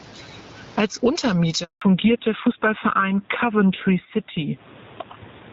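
Gain pumping runs through the whole clip, with a swing of around 20 dB. The likely cause is input gain set far too high, with a fast limiter clamping down on each peak.

A handover gap follows from 1.64 to 1.82 s. The sound fades out within a few tens of milliseconds and stays silent for 180 ms, as no speech frames arrived while the call switched networks, so whatever was said then is lost.

Fallback to narrowband begins at 1.82 s and lasts to the end. Everything above 4 kHz disappears, leaving the speech duller and rougher. That fits the call dropping from HD Voice, AMR-WB at 12.65 kbit/s, to the older AMR-NB codec at 7.4 kbit/s.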